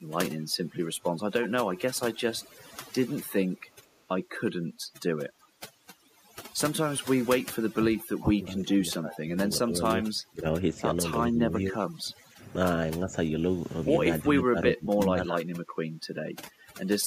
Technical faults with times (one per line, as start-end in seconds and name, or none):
0.00-17.07 overdone noise removal
2.49-2.59 echo leak
3.73-3.77 echo leak
5.41-5.48 echo leak
7.74-10.63 speech suppressed in double talk
11.30-12.55 speech suppressed in double talk
13.04-13.32 speech suppressed in double talk
14.23-15.44 speech suppressed in double talk